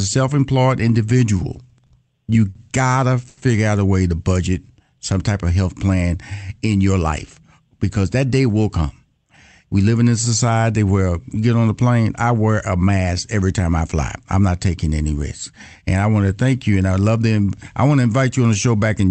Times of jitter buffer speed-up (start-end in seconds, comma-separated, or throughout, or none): 6.94-7.41, 7.83-8.23